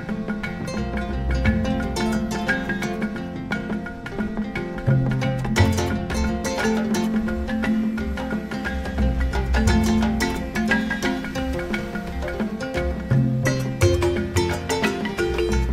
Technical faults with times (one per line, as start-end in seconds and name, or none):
none